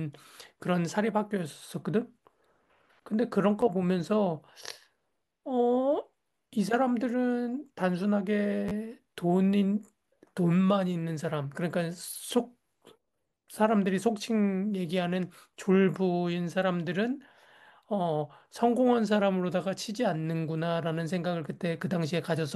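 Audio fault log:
3.61 s, 8.68–8.71 s and 13.35 s, repeated buffer: a piece of about 11.6 ms, which fits a 512-sample buffer, plays again with hard joins, twice at 8.68 s, replacing roughly 10–20 ms of new audio. Unlike a dropout's silent gap, the repeat gives a brief buzzy click.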